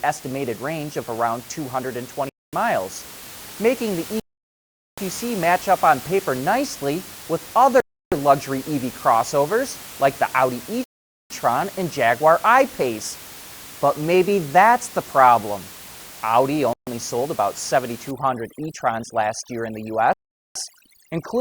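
At 2.29 s the speech drops to silence for 0.24 s and then resumes, the first of six gaps with this character. The pattern is consistent with a Bluetooth stall, most likely radio interference delaying packets until the headphone buffer emptied and playback halted until retransmissions arrived. The others fall at 4.20 s (0.78 s, after "making the" and before "match up on paper"), 7.80 s (0.32 s, after "on paper nicely with"), 10.84 s (0.46 s), 16.73 s (0.14 s, before "sold about") and 20.13 s (0.43 s). Each gap is clean silence with no fade.

From 18.11 s to the end, overdone noise removal takes hold. The room noise, about 19 dB below the speech, drops and breaks up into twinkling, warbling specks, because the reducer is pulling individual frequency bands down whenever they sit near its noise estimate. Low-level parts of the speech fall under that threshold too. The stall at 20.13 s falls inside this stretch.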